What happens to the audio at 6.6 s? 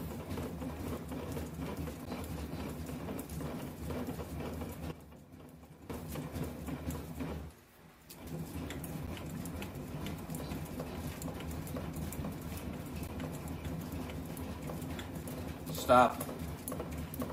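Nothing goes wrong at 6.6 s; the audio runs on intact through that moment with no dropout, click or other fault to be heard.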